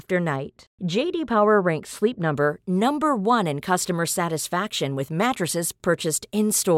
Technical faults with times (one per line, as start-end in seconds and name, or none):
0.36-2.36 de-emphasis applied wrongly